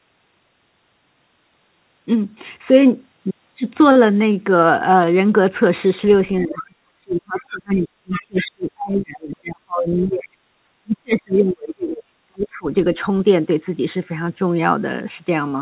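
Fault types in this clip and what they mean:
Speech suppressed in double talk: Between 6.42 and 10.29 s, and again from 10.82 to 12.68 s, the speech dips, at its deepest falling by around 40 dB, for roughly 4 s and 1.5 s of affected sound in total. This is likely an echo canceller that could not tell the near talker from the far-end echo while both were active, so it attenuated everything, the near speech included.
Other side's voice leaking through: Short scraps of a second voice appear at 6.45, 7.38, 9.98 and 11.34 s, plus a longer stretch from 7.75 to 8.22 s, sitting roughly 15 to 30 dB under the main speech. These are likely far-end audio from the loudspeaker that the echo canceller left in the microphone signal, heard through the same 4 kHz-limited G.711 call path as the main speech.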